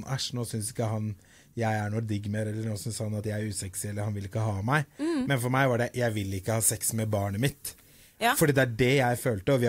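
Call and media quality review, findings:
Pre-emphasis left on, 6.09–8.49 s: de-emphasis stage skipped after a treble-boost curve, consistent with CD-style 50/15 µs. Highs sit about 8 dB hot at 10 kHz relative to 1 kHz; speech turns thin, bright, sibilant.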